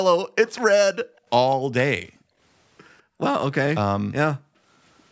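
From 0.48 to 0.61 s a faint copy of the speech trails about 200 ms behind, well below the main level: an echo leak, likely a loudspeaker-side echo canceller missing part of its pickup. The room sound then dips sharply at 1.04 to 1.27 s, 2.06 to 2.39 s, 3.03 to 3.20 s and 4.36 to 4.63 s, by about 40 dB (about 34 dB in the third). This is background gated by the echo canceller, which pulled the microphone down while the far end played.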